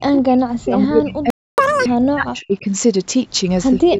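From the start to 2.66 s the speech keeps ducking, sometimes by about 40 dB. It's likely speech suppressed in double talk, with the echo canceller muting this side while the far end talks. At 1.30 s the sound just stops for about 280 ms, likely a playback stall where the player ran dry or got blocked. Right after, from 1.58 to 1.86 s, there's catch-up at higher speed: the backlog plays at 2x, so it rushes by roughly 10 semitones higher before settling back. From 3.72 s to the end the same double-talk suppression chops the speech down again.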